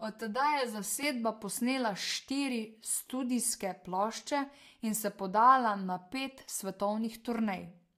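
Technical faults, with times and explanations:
0.00–1.03 s, channel delay (comb filtering): One channel trails the other by roughly 5 ms, and the two are summed to mono. Shared sound cancels at evenly spaced frequencies, starting near 100 Hz. The speech sounds hollow and phasey.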